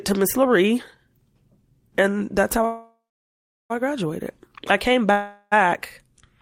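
Right after "that's how", at 2.65 s, the speech hangs in a call audio freeze until 3.72 s. A short buzzy tail fades into about 0.72 s of silence, then "I graduated I came" carries on with nothing lost. This is likely packets stalling until the jitter buffer ran dry. A shorter freeze follows "I graduated I came", from 5.11 to 5.54 s, mostly as a fading smear.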